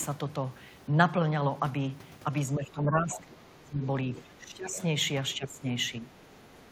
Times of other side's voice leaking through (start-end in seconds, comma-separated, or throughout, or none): 3.13-3.18, 4.16-4.21, 6.55-6.65